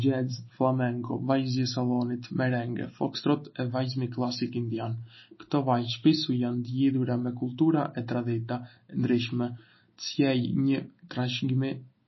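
Throughout the clip the speech carries plainly audible MP3 compression damage. The likely cause is an encoder starved of bits, which fits a rate of about 24 kbps. With so little to spend, it cuts everything above 5.8 kHz and zeroes the weaker frequency lines, which then flicker on and off between frames. The result is dull, band-limited speech with a watery, swirling texture, chirpy metallic s sounds, and softened consonant attacks.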